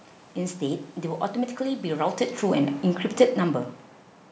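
No system faults are present: the speech is band-limited to about 8 kHz by the call's microphone processing, the background is the room's own noise, and the level shifts around two and three seconds come from the talker moving relative to the microphone.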